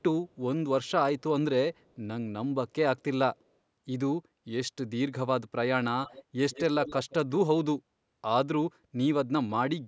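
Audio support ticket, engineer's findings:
Echo leak, five short delayed repeats of the speech: 0.29–0.35 s and 1.74–1.94 s (about 180 ms lag, very faint, roughly 40 dB down); 6.05–6.24 s, 6.50–6.63 s and 6.85–7.14 s (about 160 ms lag, much louder, roughly 10–20 dB down). Likely cause: far-end echo canceller letting loudspeaker pickup through. Spectrogram shows ghost copies of the preceding harmonics shifted right.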